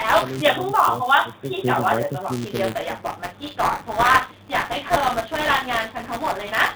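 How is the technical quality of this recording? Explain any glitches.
Two faults are audible in this speech recording, over a narrowband channel where nothing passes above about 4 kHz.

Buffer tearing runs the whole length. Wherever there is speech, a steady robotic buzz sits at 188 Hz, which fits a 256-sample buffer. The writer and reader of the ring buffer have slipped, so a small slice of each period replays audio from roughly 10 ms earlier, with hard joins on both sides.

From 0.83 to 0.99 s, the speech dips by about 15 dB for a short stretch. This is likely speech suppressed in double talk: an echo canceller, unable to separate the near talker from loudspeaker echo, attenuated both.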